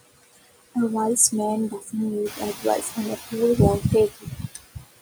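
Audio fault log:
throughout, noise suppressor artifacts: the suppressor lowers whatever bands it judges steady noise frame by frame, so the room noise sinks between words and swells beneath them.
0.01–0.76 s, 1.8–1.93 s, 4.1–4.38 s, 4.55–4.84 s, speech cut by the noise suppressor: parts of the speech are treated as noise and pulled down by about 18, 10, 13 and 12 dB, leaving them faint and swallowed.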